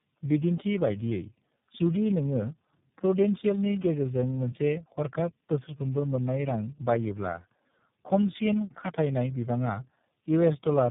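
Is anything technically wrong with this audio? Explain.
Yes. Throughout the clip there is tandem speech coding: the call was decoded and re-encoded at each network border, with each speech codec working on its predecessor's damage. The speech sounds rough, muffled and warbly, with nothing above 3.7 kHz, which fits three speech codecs in a row, such as GSM full rate, AMR-NB and iLBC.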